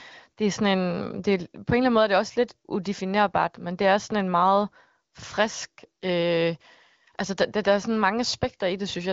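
Nothing's wrong here: it's a speech recording carried over what sounds like the AMR wideband (HD Voice) codec, with the top end stopping at about 7.5 kHz as you'd expect from that path.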